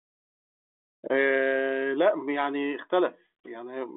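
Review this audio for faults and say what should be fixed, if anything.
Nothing needs fixing, since the review turns up no faults in the audio.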